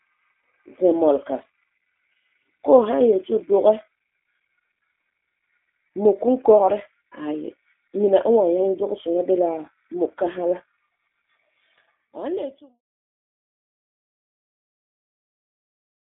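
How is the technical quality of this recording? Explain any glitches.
The recording has audible codec damage across its whole length.

G.729 codec, throughout: a low-rate encoder models speech with a vocal tract filter, pitch predictor and sparse pulses, which fits 8 kbit/s. This leaves a rough, slightly synthetic timbre, with the band confined to roughly 250 Hz to 3.6 kHz and nothing above 3.7 kHz.

The smooth fade-out, beginning around 11.5 s and ending at 12.81 s, is a clean editorial fade with no click.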